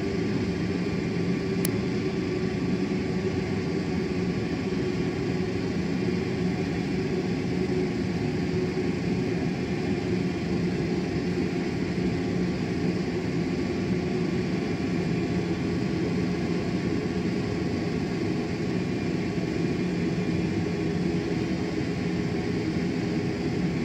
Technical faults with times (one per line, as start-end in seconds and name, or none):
1.65 uninitialised buffer